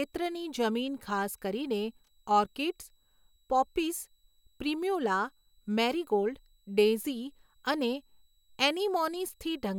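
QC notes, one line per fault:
Throughout: switching supply whistle, a thin high tone near 4 kHz sitting about 45 dB below the speech, its pitch wandering between 3.87 and 3.97 kHz, because a switching power supply is running in an audible burst mode or beating with another supply as load shifts.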